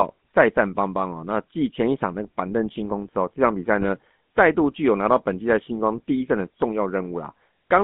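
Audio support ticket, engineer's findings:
GSM full-rate codec in the chain throughout: regular-pulse excitation, vocal-tract model, consistent with the 13 kbps full-rate coder. Line band limited to about 150 Hz to 3.5 kHz. Speech plainly buzzy and gravelly, harsh excitation roughness, no highs.

GSM bit errors at 3.81 to 3.85 s: corrupted filter, pitch or gain parameters reaching the decoder, which fits two damaged frames on a weak link. Brief squawk and gargling burst, spectrum bent or level jumping for those 36 ms.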